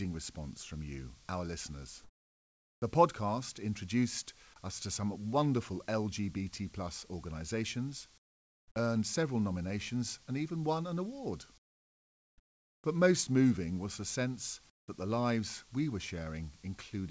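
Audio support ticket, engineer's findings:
Comfort noise in place of the background, four pauses: sender's voice detector likely gates off audio during silence (discontinuous transmission), receiver substitutes synthetic noise. Real background replaced by flat, featureless hiss, dropping about 15 to 23 dB below the already quiet bed (about 32 dB under loud passages). At 2.04–2.82 s, after "from you our listeners"; 8.18–8.76 s, after "plus organisations"; 11.58–12.84 s; 14.70–14.88 s, after "moving was the sense". Band ends at 8 kHz, consistent with G.722 at 64 kbps.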